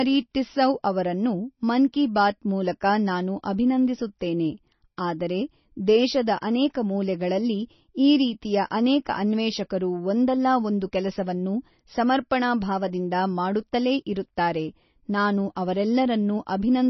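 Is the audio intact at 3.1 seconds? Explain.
No. The speech at 3.1 s carries damage that runs through the whole clip, likely from heavy MP3 compression. Nothing remains above about 5.9 kHz, so the treble is cut. Weak frequency lines flicker between frames, giving a watery, swirly sound, which fits a bitrate near 24 kbps.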